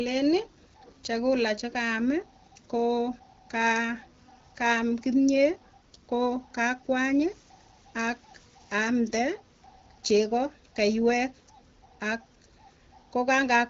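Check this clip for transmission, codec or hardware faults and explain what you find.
Nothing here calls for a fix; the speech comes through the AMR wideband (HD Voice) codec at 12.65 kbit/s with only the light coding texture expected at that rate.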